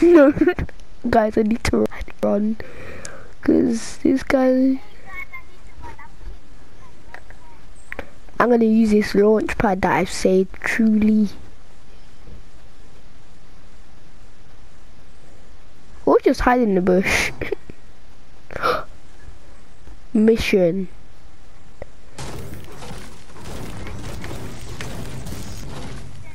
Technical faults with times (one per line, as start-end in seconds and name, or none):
0.74-2.23 chunks out of order
11.89-13.00 chunks out of order
24.15-25.63 chunks out of order